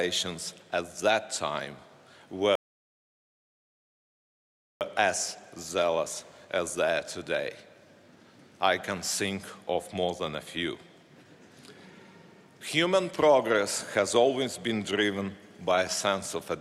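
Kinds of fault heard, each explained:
Rebuffering stall: at 2.55 s the sound drops to silence for about 2.26 s, then picks up at 4.81 s exactly where it broke off, with nothing skipped. The player had exhausted its downloaded audio and paused until more data arrived, adding time without losing any.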